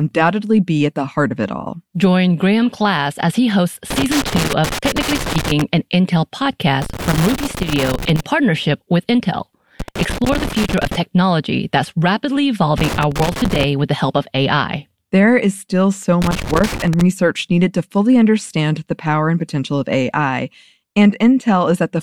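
Loose connector crackle hits the speech five times: 3.90 to 5.62 s, 6.82 to 8.21 s before "partnership with", 9.80 to 10.95 s, 12.78 to 13.64 s, and 16.22 to 17.01 s. A worn contact keeps making and breaking. The signal is chopped into irregular bursts of scratchy crackle.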